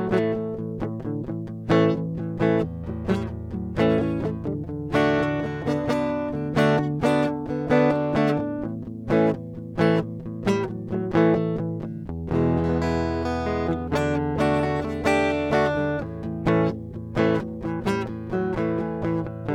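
No technical faults can be heard in this music.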